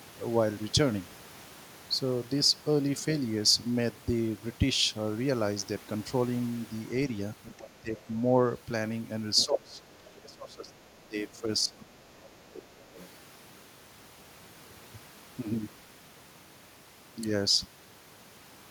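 An echo canceller that likely left part of the loudspeaker signal in the microphone path lets the other side's voice leak through this speech recording. A faint second voice, about 20 dB below the talker, appears from 7.43 to 8.03 s, 9.36 to 10.74 s and 12.54 to 13.08 s, plus a much fainter scrap, around 35 dB down, from 11.28 to 11.74 s. During double talk the same canceller likely mistook the talker for echo and turned both down, suppressing the speech. From 7.57 to 7.97 s the talker dips by roughly 20 dB for about a third of a second. From 9.46 to 12.59 s the talker drops by up to about 25 dB, for around two seconds in total.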